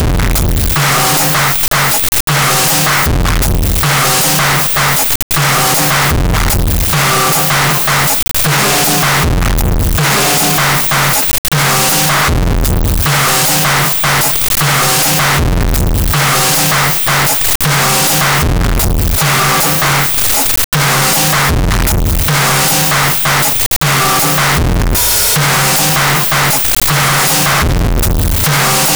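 Throughout, the music is extremely loud and harsh, with background noise as loud as the music, though pitch survives. The waveform is a near-square block at an almost fixed, high level. This is float read as integer: 32-bit float data was likely read as 32-bit integers.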